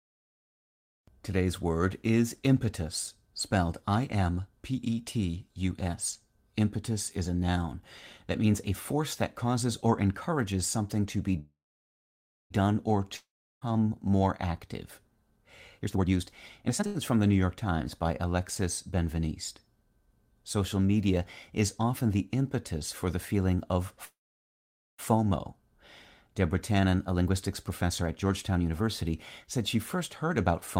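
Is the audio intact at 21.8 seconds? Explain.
Yes, the audio at 21.8 seconds is intact, with no dropout, click, distortion or other fault at that moment.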